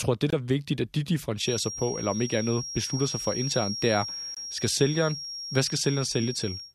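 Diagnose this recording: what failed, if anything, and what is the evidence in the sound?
Two abrupt holes in the speech, at 0.30 to 0.34 s just before "er vigtigt at de" and again at 4.34 to 4.37 s. Each starts sharply with no fade, and the timing stays intact. This is a corrupt frame muted at the codec stage: the decoder rejected a damaged compressed frame and the player substituted silence. Each gap's length fits a single lost frame.

From 1.35 s, right after "er vigtigt at de", to the end of the clip, a thin, steady whistle near 5.6 kHz sits around 10 dB below the speech and swells and fades slowly in level. This is a feedback whistle, likely from an acoustic loop between loudspeaker and microphone held just at the edge of oscillation, so the tone sustains without building up.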